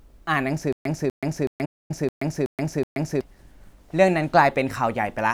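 From 0.73 s to 3.21 s the speech has a stutter with silent gaps. A 246 ms fragment plays, then digital silence follows for 128 ms. The burst returns every 373 ms, six times. The likely cause is a stalled stream replaying its last buffer at each retry, so the speech meant for that span is lost.

Inside that stretch, from 1.65 s to 1.91 s, a playback stall cuts the output to silence for 241 ms. The sound halts mid-flow and then resumes. This likely comes from the player running out of data or its thread being blocked.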